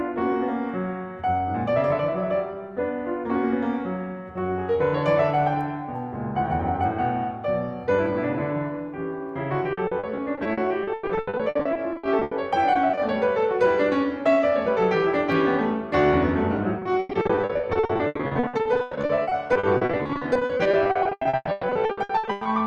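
Repeated packet loss (robotic sound) hits the music at 9.73–12.33 s, 12.73–12.99 s and 16.79–22.47 s. Lost packets are patched by extending prior audio, giving choppy playback with gaps up to 120 ms.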